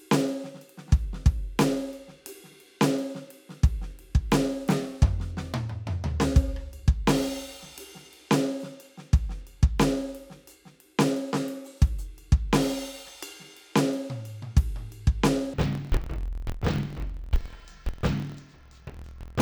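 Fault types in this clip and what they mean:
Interleaved audio read as planar: From 15.54 s to the end, the music drops a full octave and turns doubled and choppy. Each 24 ms block holds alternating left and right samples. The player reads the first half as left and the second half as right. Both halves then play at half speed, side by side. The overall tempo holds, but the pitch falls 12 semitones, and the block edges flutter at about 41.7 Hz.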